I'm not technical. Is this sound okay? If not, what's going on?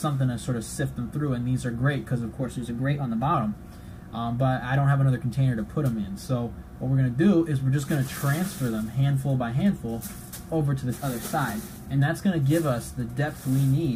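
No. From 2.40 to 3.34 s and again from 10.94 to 12.00 s, the sound briefly runs about 6% fast and a semitone sharp, then snaps back. This is likely a drift correction step, where clock-matching software abruptly changes playback speed to rebalance its buffer.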